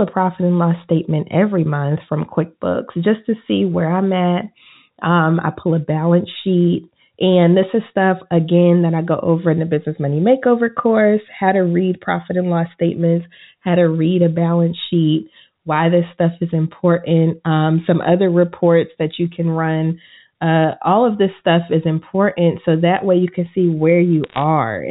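It's a speech clip, and the trouble sits right at the very end: from about 24.24 to 24.42 s, just after "way you can see", there's a short burst of crackle from bit errors on a digital phone line. Flipped bits each corrupt a single sample, and a hit on a high-order or sign bit throws out a sharp tick. The density suggests an error rate somewhere under one percent. Underneath, it's a G.711 A-law telephone path, so nothing above 4 kHz comes through.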